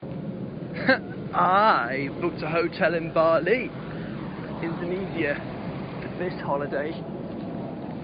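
Nothing stood out on listening to this speech, with only a faint room noise sitting about 34 dB below the voice.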